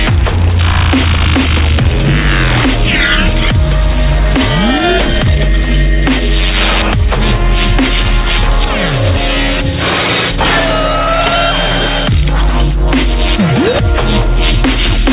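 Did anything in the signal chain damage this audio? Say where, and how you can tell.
No, nothing in the chain has damaged the signal; it carries the narrowband character of a normal call path, with no content above 4 kHz, which fits G.711 mu-law coding at 64 kbps.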